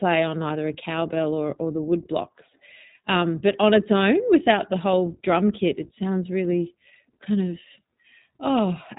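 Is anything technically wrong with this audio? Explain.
Yes, the whole clip has been through the iLBC codec, and the damage is plainly audible. It codes each 20 ms frame independently, which gives the speech a rough, slightly synthetic edge, consistent with roughly 15.2 kbps, and nothing above 3.8 kHz survives, so it sounds thin.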